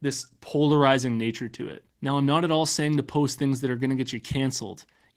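Throughout, the speech carries Opus voice compression artefacts: coarse hybrid coding leaves it hoarse and a bit robotic with smeared highs, which fits a bitrate around 16 kbps.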